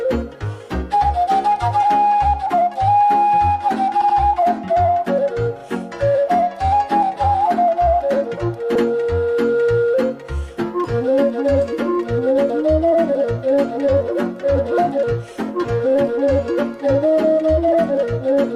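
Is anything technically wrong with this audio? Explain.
Yes. Repeated frames: a short run of compressed frames was delivered more than once, so the decoder plays the same slice again. At 4.01 s an 80 ms block plays twice more, at 5.59 s a 40 ms block repeats once, and at 8.75 s an 80 ms block repeats once, each heard as a brief stutter.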